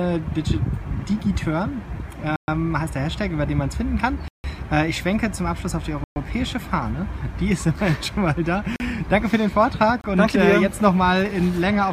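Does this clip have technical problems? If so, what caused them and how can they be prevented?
Yes. Five blocks of digital silence occur, at 2.36–2.48 s, 4.28–4.44 s, 6.04–6.16 s, 8.76–8.80 s and 10.01–10.04 s. Each time, zeros were played, most likely because the output buffer went unfilled, so the audio cuts abruptly to silence and back. The gaps last 28 to 160 ms and are heard as short holes. To prevent them, give the audio process more buffer headroom and higher scheduling priority, and guard against invalid values reaching the output.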